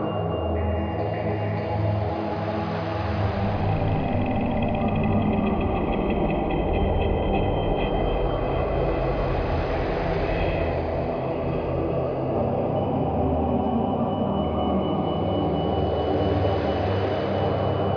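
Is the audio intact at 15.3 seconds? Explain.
Yes, at 15.3 seconds the audio is intact, with no dropout, click, distortion or other fault present at that moment.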